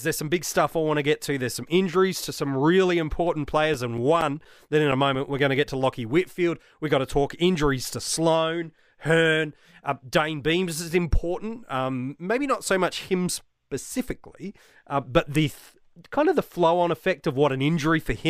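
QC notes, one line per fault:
3.03–5.39 s, CD scratch ticks: eleven ticks, about five per second, each only milliseconds long, after "injuries to some really"; unreadable data interpolated or muted once per disc turn.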